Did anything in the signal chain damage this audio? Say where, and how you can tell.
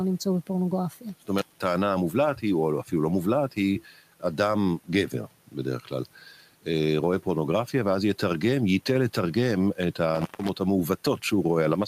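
Yes. An intermittent contact in the analogue wiring cuts the speech from 1.38 to 1.60 s, with the line open for about 188 ms. Crackle marks both edges and faint hiss fills the gap. A loose cable or plug briefly broke the circuit. The room noise, about 26 dB below the speech, belongs to the recording.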